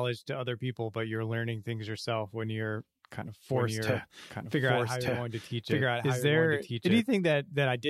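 A second copy of the same audio stream is being mixed back in roughly a second late, most likely because a slower capture path or an edit left two copies out of step, producing a doubled audio track in this speech clip. From 3.52 s to 7.02 s a full-band duplicate at about the same level runs behind the original, with no decay or room colour, and it cuts in and out abruptly at those points.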